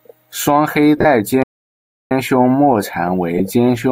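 From 0.97 to 1.05 s, after "双黑", lost LE Audio frames hit the speech. The LC3 decoder fills the gaps, including a run of about 40 ms, with a noisy smear. At 1.43 s the sound stops dead for 0.68 s, a playback stall, likely a starved buffer. It resumes at "胸沫蝉". Later, at 3.38 to 3.40 s, another brief frame loss leaves a short, rough blur.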